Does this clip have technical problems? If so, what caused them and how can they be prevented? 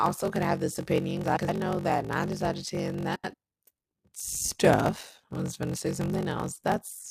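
Yes. A steady buzz at 46.9 Hz runs through the whole clip, and the speech plays at 0.861 times normal speed while keeping roughly its natural pitch. This is a block size mismatch (padded). One stage delivers shorter blocks than the next reads, which fits a 1024-sample read block, and each block is topped up with zeros. Those silent gaps repeat at the block rate, which produces the buzz and stretches the timing. To prevent it, match the producer's block size to the consumer's, or buffer so that every read is completely filled.

Frames out of order cause two garbled flutters. The first runs from 1.24 to 1.49 s, between "could have this opinion" and "know that nine". The second runs from 3.15 to 3.34 s, just after "of ten". In each, two neighbouring runs (about 104.5 ms in the first, 78.4 ms in the second) play swapped, and no time is lost. To prevent it, reorder packets by sequence number in a jitter buffer before decoding.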